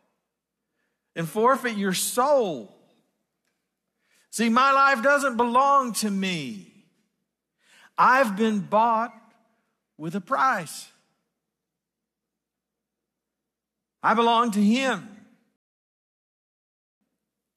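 At 15.56 s the player runs out of downloaded audio and halts, a rebuffering stall, waiting until more data arrives. The speech cuts to silence until 17.01 s, then resumes exactly where it stopped, with nothing missing but about 1.45 s added.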